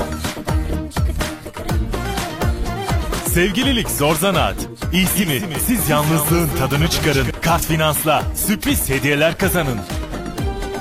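From 4.93 to 7.31 s there's a doubled audio track: a second full-band copy trails the original by roughly 200 ms, about 10 dB down, with no decay or room colour. It kicks in and drops out abruptly, most likely because a slower capture path recorded the same sound again.

Then at 8.66 to 8.71 s there's an overlap between stream segments. Two segments claimed the same stretch of time, and the trimmed overlap removed a few milliseconds of real sound. You hear it as a quick skip where the waveform jumps, which fits 2-second segment boundaries.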